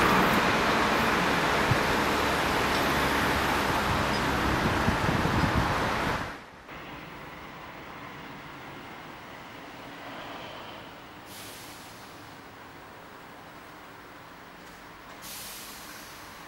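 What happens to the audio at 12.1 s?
Nothing goes wrong at 12.1 s: the audio is intact there.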